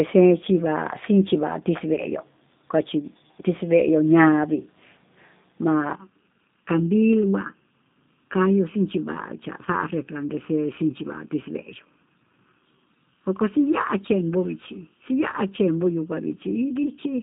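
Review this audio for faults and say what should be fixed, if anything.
G.729 codec damage runs throughout: band-limited to roughly 200 Hz–3.7 kHz, with rough, synthetic pulse-coded speech, consistent with an 8 kbit/s G.729A link. Prevent it by using a wideband codec such as G.722 or Opus end to end.

VoIP packet loss concealed by the speech codec occurs at 1.95–2.01 s and 16.83–16.92 s. The decoder stretches the last pitch and filter into a fading, stretched sound, consistent with one lost 20 ms packet each time. Prevent it with jitter buffering, forward error correction or redundancy on the network path.

Channel delay (comb filtering) runs from 5.95 s to the end. One channel lags by under a millisecond before the mono sum, leaving hollow, phasey notches from around 700 Hz upward. Prevent it by aligning both channels, or taking a single channel, before any mono downmix.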